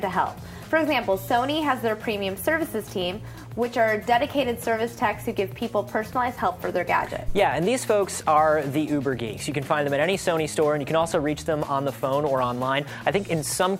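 At 7.28 s there's a phantom power thump, a low, dull knock that's gone by about 7.37 s. What happened is the supply got switched on or off on a live input, and that sudden DC step shot straight through the coupling capacitors into the signal path. It peaks around -15 dBFS and dies away in roughly 20 ms, which makes it a short, deep bump rather than a long boom.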